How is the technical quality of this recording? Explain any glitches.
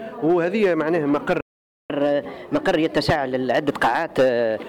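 The recording has two linked playback glitches, a dropout followed by a stretch of sped-up, raised-pitch sound.

Playback stall, 1.41 to 1.90 s: the audio cuts to silence for about 0.49 s in mid-flow, then resumes. The likely cause is the player running short of buffered data, or its playback thread being held up, so nothing reached the output until it recovered.

Catch-up at higher speed, 1.90 to 4.63 s: right after the gap, the sound runs at 1.15 times normal speed and sits about two semitones sharp. The player is resampling its backlog faster to recover the time lost in the stall, then settling back to normal speed and pitch near the end.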